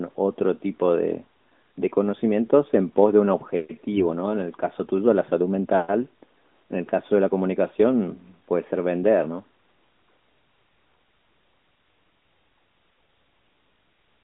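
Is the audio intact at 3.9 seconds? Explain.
No. From 3.92 to 4.03 s, AMR bit errors corrupt roughly four codec frames: a few percent of the weakly protected bits arrive flipped, misplacing excitation pulses and skewing the pitch, gain and spectral values, so the speech turns briefly hoarse, scratchy and gargly while keeping its pitch and level.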